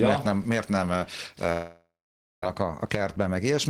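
From 1.52 to 2.43 s, a fading buzz decays into silence, likely a long network dropout. Unlike brief packet loss, the missing stretch never returns.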